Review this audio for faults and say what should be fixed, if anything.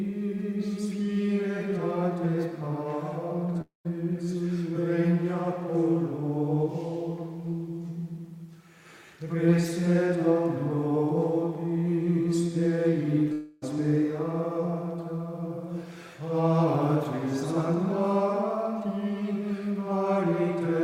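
Two gaps break the audio, each likely a long network dropout. From 3.61 to 3.87 s, about 0.24 s of audio is missing. The last sound is stretched into a fading buzz, which thins to near silence before the audio resumes. From 13.33 to 13.64 s, about 0.3 s is lost. Here the smeared fill runs right through the gap without going fully silent. In both cases the audio comes back further on, and the lost part is never heard. To prevent this, stabilise the network path and use a deeper jitter buffer with packet redundancy or forward error correction.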